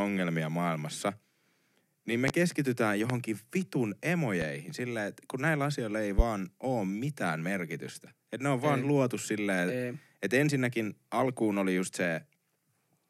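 Four loud pops cut through the speech, at 2.28–2.32 s, 3.10–3.14 s, 4.42–4.46 s and 6.19–6.23 s. Each is a single sharp thump lasting about 40 ms that stands well above the voice, except the one at 4.42 s, which is noticeably milder. The speech carries on underneath each one. The likely cause is a sudden voltage step, from static, a switch or a connector, getting into the signal chain.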